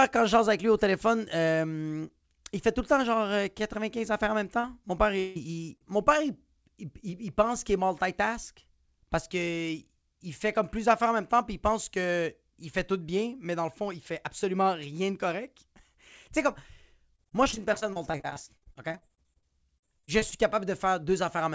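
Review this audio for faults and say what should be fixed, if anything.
Short concealed packet loss: at 4.6 s, just after "affaires en même", and at 5.8 s, just before "mon père il pense", about 40 ms of packets arrived too late for the decoder. The receiver bridged each hole by extending the preceding sound, leaving a brief smear. A deeper jitter buffer would absorb these late arrivals.

Long network dropout: from 5.20 to 5.37 s, shortly before "mon père il pense", audio stopped arriving for about 160 ms, most likely a network interruption. The receiver kept extending the last sound as a fading buzz across the whole gap, so nothing real is heard there and that stretch is lost. Redundancy or forward error correction on the link would help.

Repeated packet loss (robotic sound): between 17.16 and 20.33 s, packets kept going missing, dozens of holes of up to about 40 ms each. Concealment filled roughly a quarter of that stretch, so the sound turns choppy with fragments missing. 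Fixing the congested or unstable network path, or adding packet redundancy, would prevent it.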